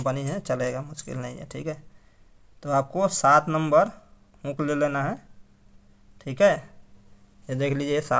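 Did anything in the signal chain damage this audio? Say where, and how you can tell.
No, nothing in the signal chain has audibly damaged this audio. No stage, from capture through to playback, leaves an audible mark on it.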